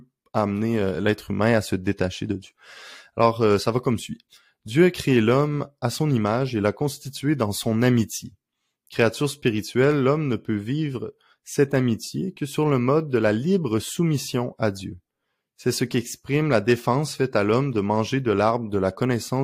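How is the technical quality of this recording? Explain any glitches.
Listening through the recording, nothing in its technical quality stood out, and there are no glitches to explain.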